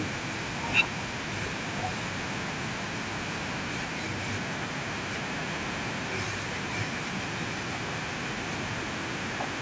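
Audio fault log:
No faults detected.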